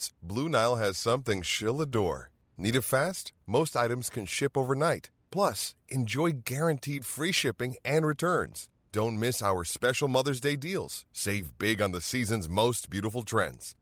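No technical faults can be heard in this recording.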